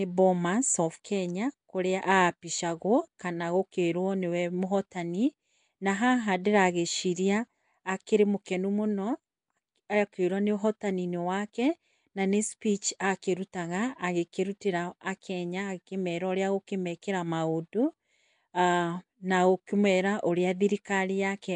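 Throughout the speech there is a rough, hissy halo and a smeared, underwater quality, and nothing above 10.7 kHz. This is likely Nellymoser compression, which codes short blocks at a fixed two bits per sample and fills starved bands with noise. The sound fits a bitrate of about 44 kbps.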